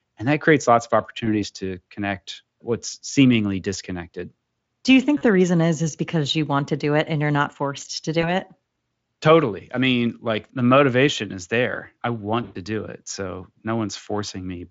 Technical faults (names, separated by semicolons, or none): VoIP packet loss concealed by the speech codec